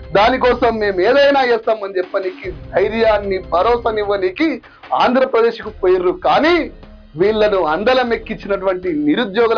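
Nothing in this one calls for a note: there are no glitches, dropouts or other technical trouble to point to anywhere along the way.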